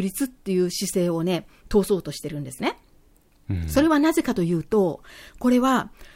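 No technical faults are audible anywhere in the speech recording.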